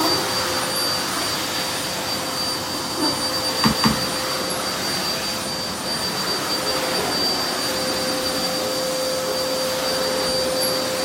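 Overlapping chunks at 3.73 to 3.93 s in this recording of sounds: about 200 ms plays twice, causing a brief stutter. The audio was handled in blocks of roughly 4.0 s, and the next block began before the previous one finished, duplicating that stretch at the join.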